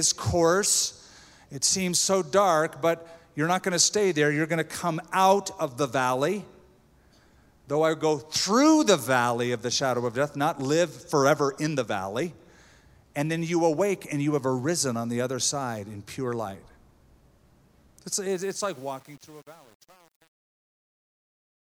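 Truncation distortion on a fade runs from 18.30 s to the end at 21.77 s, and it is at its worst from 18.37 s onward. The fade-out begins around 18.3 s, and the gain stage behind it keeps too few bits and adds no dither, which fits an 8-bit path. As the level sinks toward the smallest step, the waveform collapses into coarse square steps. The tail turns gritty.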